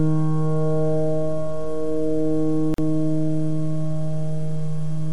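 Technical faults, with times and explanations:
2.74–2.78 s, gap at a join of encoded pieces: the sound drops out for about 42 ms, then picks up exactly where it stopped. Two separately encoded pieces were butted together with the encoder's start delay and last-frame padding left in, leaving silence with smeared edges.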